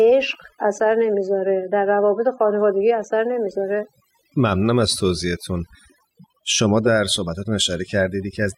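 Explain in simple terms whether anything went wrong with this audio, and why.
Overdone noise removal affects the whole recording. A noise reduction tool was set too aggressively, so it shut off narrow slices of sound along with the noise. The gaps drop in level and break up into twinkling, warbling specks.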